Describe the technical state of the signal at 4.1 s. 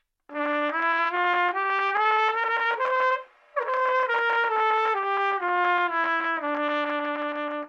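At 4.1 s the audio is inside a Bluetooth SBC bit pool drop running from 3.76 to 6.24 s. The treble sounds dulled and a gritty noise rises, which fits the bit pool falling from 31 to 16, near 110 kbps, starving the top sub-bands.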